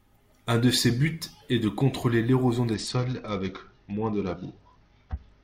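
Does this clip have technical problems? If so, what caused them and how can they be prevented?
Yes. From 2.74 s, right after "est de contrôler l'érosion", and continuing to the end of the clip, there is a Bluetooth SBC bit pool drop. The speech loses its treble and turns dull while a gritty noise floor rises. This points to the phone cutting the SBC bit pool from around 28 to about 8, roughly 72 kbps, to keep a congested link alive, which starves the upper sub-bands and coarsely quantises the rest. To prevent it, reduce radio congestion by keeping the devices close, clearing 2.4 GHz interference, or using a wired connection or a more robust codec.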